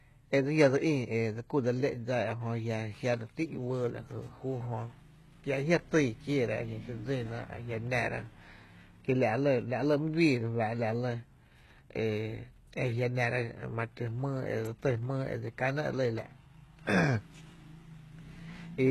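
Throughout the speech, the s sounds and other sibilants come out gritty, metallic and lispy, and the treble sounds synthetic and disconnected from the lower voice, with nothing at all above 12.3 kHz. This is likely HE-AAC compression at heavy damage. Only the lower spectrum is truly coded, and the upper band is rebuilt by copying lower bands upward, so harmonics fail to line up across the join, which fits a very low bitrate around 16 kbps.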